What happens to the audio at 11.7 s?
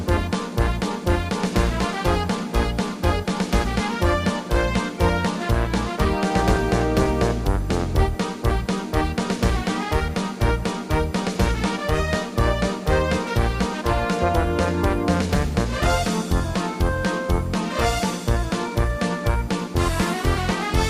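Nothing goes wrong at 11.7 s; the audio plays through that moment intact, with no dropout, click, distortion or other fault.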